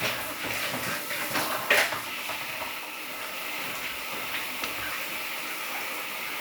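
No technical faults can be heard anywhere in this recording of sounds.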